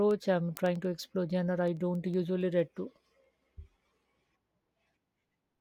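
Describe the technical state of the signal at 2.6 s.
At 2.6 s the signal carries word clock ticks. They run through nearly the whole clip, from 0.11 s to 5.54 s. The receiving device runs on its own clock, not locked to the sender's. The two clocks drift apart by roughly 200 ppm. Each time they slip past each other, the data is misread briefly. The ticks fit a single-sample slip. The result is sharp ticks of uneven strength, about ten per second.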